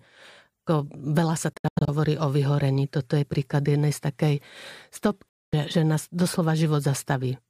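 Audio packets on the way to the headphones likely arrived too late and were dropped, a Bluetooth dropout, so the output fell silent until good packets returned. From 1.53 to 1.89 s, after "veľa sa" and before "o vyhorení", the speech breaks into several gaps totalling about 213 ms, the longest 85 ms. From 5.28 to 5.54 s, before "že nás", about 235 ms is missing. Each time the speech resumes as though it had played on through the silence.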